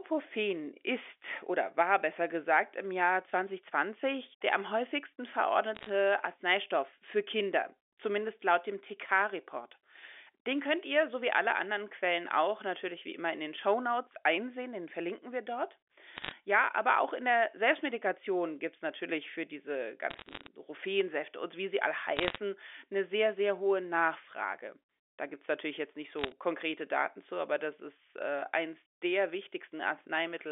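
Speech heard over a telephone-band line, roughly 300 Hz to 3.5 kHz, carries short bursts of sharp ticking crackle at 5.75–5.89 s, 16.17–16.32 s, 20.10–20.47 s, 22.17–22.38 s and 26.19–26.32 s. These are bit errors on a digital phone line. Somewhere between a half and one percent of bits flip, and each flip corrupts a single sample, with flips in high bits or the sign of loud samples turning into an isolated click. Unlike packet loss, the speech underneath never drops out or repeats.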